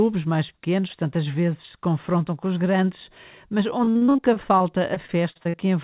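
From 3.84 to 5.55 s the speech breaks into repeated packet loss with a robotic sound: around eighteen short holes, none longer than 45 ms, each patched by stretching the previous sound, so about a quarter of the stretch is filled in. It sounds choppy and robotic. On a spectrogram, repeated harmonic smears and notches appear below the 4 kHz ceiling of the G.711-like call path. The waveform shows copied cycles and abrupt joins.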